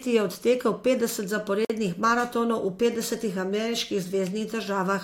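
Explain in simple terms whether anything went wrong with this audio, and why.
At 1.65 s, between "je odtekel petdeset" and "maratonov v petdesetih", the speech drops out for about 50 ms before carrying on. This is a gap at a join of encoded pieces: separately encoded parts were joined with their padding silence left in.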